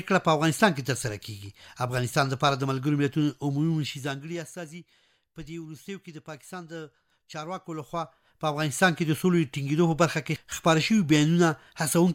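From 3.73 to 4.58 s there's zipper noise: the level drops by roughly 15 dB in unsmoothed steps, about a hundred a second, and each jump leaves a tiny click, so a fast ticking buzz rides on the sound while it fades.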